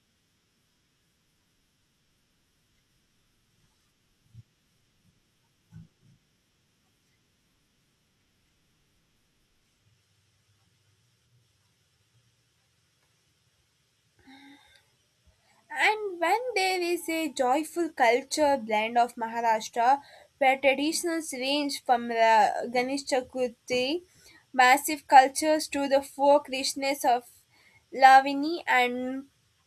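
A speech recording, with nothing technically wrong to point to at any moment. There are no times or causes to report.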